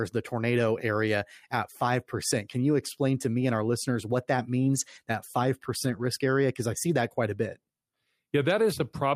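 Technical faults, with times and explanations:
4.75–4.97 s and 5.83–6.05 s, lost packet rebuilt from error correction: no gap, just rougher, noisier sound while the decoder plays low-bitrate backup copies carried in the following packets.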